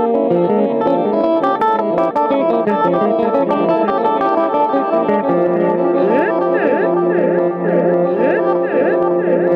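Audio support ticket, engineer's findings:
No faults found in the signal path: level, timing and continuity hold steady throughout the audio, with nothing requiring action on this ticket.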